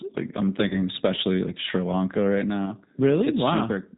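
From start to finish the speech sounds slightly rough and synthetic, with a thin, band-limited quality and nothing audible above 4 kHz. This is the G.729 codec, whose damage here is plainly audible, and the character fits its 8 kbit/s mode. Rather than storing the waveform, the codec rebuilds each 10 ms frame from a vocal tract filter, a pitch predictor and a handful of pulses, which produces that coarse, artificial texture.

From 0.69 to 0.80 s, just before "especially like", the voice smears into a stretched sound that fades and stays weak or distorted for a moment afterwards. This is VoIP packet loss concealed by the speech codec, and the gap fits about 20 ms of missing audio, two 10 ms frames. The decoder repeats its last pitch and filter with falling gain, and since each frame builds on the one before, recovery lags after packets return.

A shorter version of the same fault occurs from 2.66 to 2.71 s. 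The sound briefly stretches before settling back, which fits a single lost 10 ms frame being filled in by extrapolation.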